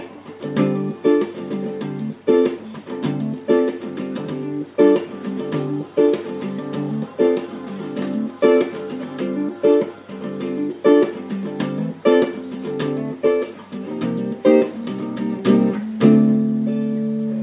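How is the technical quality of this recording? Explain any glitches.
No technical glitches are audible anywhere in the recording.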